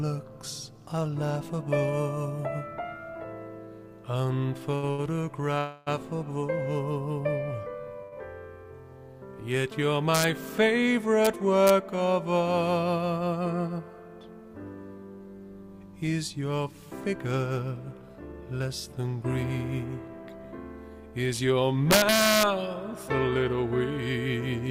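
The audio has four kinds of network and arithmetic faults. Short stalls from late packets at 4.75–4.84 s, 4.90–5.00 s and 8.03–8.14 s hold the last sound for 71, 78 and 91 ms. Because no audio is lost, each is heard as a stretched sound rather than a dropout. A longer call audio freeze at 5.58–5.89 s is likely from packets delayed in transit. The held sound continues as a fading buzz or hiss for 283 ms, never reaching silence, and then resumes where it stopped. Integer overflow cracks occur at 10.15–10.24 s (about 2 dB over the limit), 11.25 s, 11.67–11.70 s and 21.91–22.43 s (about 4 dB over). The peaks wrap to the opposite sign, which sounds much sharper than ordinary clipping. Jitter buffer speed-ups at 12.83–13.68 s (111%) and 18.02–20.09 s (107%) cut roughly a tenth and a seventh of a second by removing short pitch periods. The audio sounds hurried, but its pitch stays the same, unlike a resampling error.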